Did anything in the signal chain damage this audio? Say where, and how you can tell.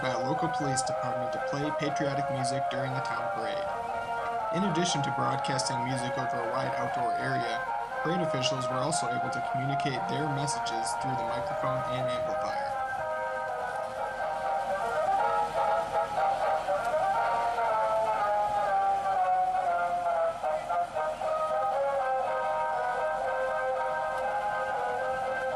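No, nothing along the signal chain has left an audible mark, and no stage introduced any damage.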